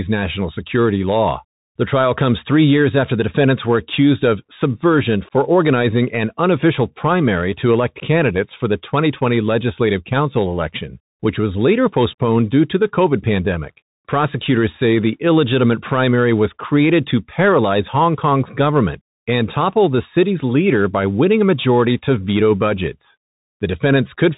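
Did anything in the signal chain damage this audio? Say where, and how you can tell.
Yes, at the codec: a Bluetooth CVSD headset codec runs throughout. Its one-bit adaptive delta coding removes everything above 3.8 kHz, adding granular hiss and scratchy s sounds.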